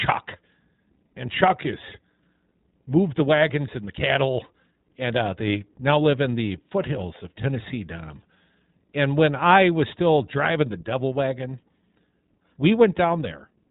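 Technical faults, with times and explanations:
Throughout iLBC codec: speech is plainly rough and synthetic because each frame, apparently 20 ms, is coded independently. The spectrogram shows a hard ceiling at 4 kHz.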